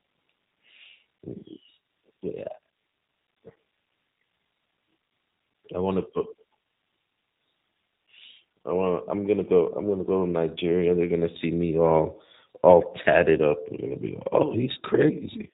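Throughout, the speech passed through a G.729 codec, rebuilt from a vocal tract model at what sounds like 8 kbit/s, leaving nothing above 3.8 kHz and a plainly rough, synthetic texture.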